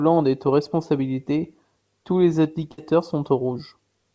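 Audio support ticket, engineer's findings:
Burst of packet loss, 2.72 to 2.80 s, right after "aux responsabilités tous les". Jitter buffer/concealment stage: about 57 ms of last sound held and faded, then playback jumps ahead, roughly 60 ms missing. Band-limited to 8 kHz, consistent with G.722.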